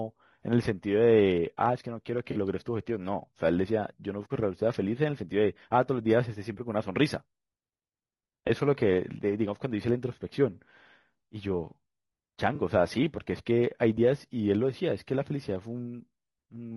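Low-delay AAC compression runs from the start: the speech is rough and grainy, with noise filling between the harmonics and a thin, synthetic top band. This is likely AAC-ELD, whose short frames resolve pitch poorly, and the damage fits a bitrate around 32 kbps.

AAC frame loss with concealment occurs at 2.31–2.37 s, 8.47–8.50 s and 12.55–12.60 s. The decoder rebuilds the missing audio from the last good spectrum, so each spot sounds like a brief smeared, noisy patch, with 40 ms, 20 ms and 40 ms lost respectively.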